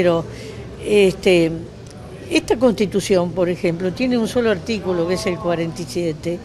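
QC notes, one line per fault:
No faults detected.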